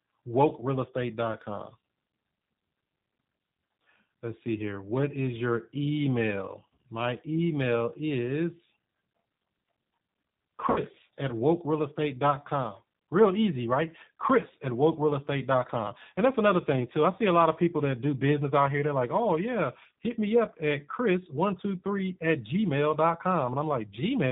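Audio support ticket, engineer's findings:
G.729 codec damage, whole clip. Band stops at 4 kHz, slightly rough, synthetic texture, plainly audible. Vocal tract filter and pitch predictor with sparse pulses. Unlike plain telephone band-limiting, the grain is in the speech itself. Points to an 8 kbit/s G.729A path.

VoIP packet loss concealed by the speech codec, 10.70 to 10.79 s. Sound smears into a fading buzzy tone or coloured noise instead of clicking or going silent. Decoder extrapolated its last pitch and filter for about 60 ms, fitting three lost 20 ms packets. Weak recovery afterward, unlike a plain dropout.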